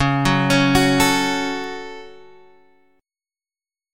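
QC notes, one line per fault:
1.64 s, bit error spike: a single sharp tick at about -24 dBFS, lasting just two samples. A flipped bit threw the sample values up by a power of two before they snapped straight back, so the click is broadband and unrelated to the surrounding sound.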